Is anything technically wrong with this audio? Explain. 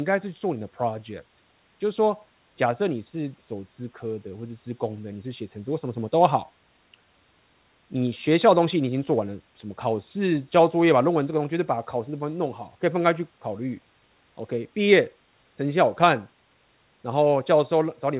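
No, nothing is technically wrong with this speech recording. It has the narrowband sound of a telephone-grade call path, with nothing above 4 kHz, and faint room noise sits about 42 dB below the speech.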